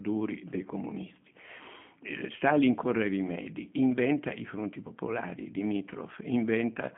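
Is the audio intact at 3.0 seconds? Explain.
No. At 3.0 s, as across the whole clip, the speech carries plainly audible G.729 codec damage. Rebuilt from a vocal tract filter, pitch predictor and sparse pulses, fitting an 8 kbit/s rate, it sounds rough and synthetic. A spectrogram shows a hard ceiling near 3.5 kHz with nothing above.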